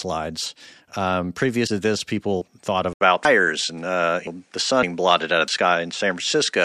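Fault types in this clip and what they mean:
Input switched to a poorer device: the recording likely moved to a different, lower-grade input partway through, so from about 2.93 s to the end the speech loses its upper frequencies and turns duller. The change arrives with a short gap of about 80 ms, the level shifts by roughly 5 dB, and a new background noise appears, sitting around 45 dB below the speech, belonging to the second device rather than the first.
Dropped buffer (overrun): the software likely fell behind reading from the hardware, which overwrote samples before they were collected, so chunks of audio vanish and the surrounding sound is spliced straight together with no gap. At 3.25 s roughly a fifth of a second is lost, and at 5.48 s about a tenth of a second, each heard as the speech jumping abruptly forward.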